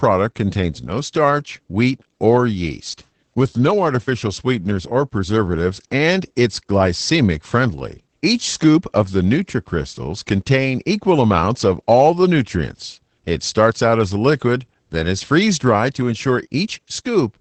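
Opus voice compression runs throughout, with content cut off above about 8 kHz and coarse excitation, which fits a low bitrate near 12 kbps. The speech sounds muffled, hoarse and slightly robotic, and a spectrogram shows an empty band above 8 kHz.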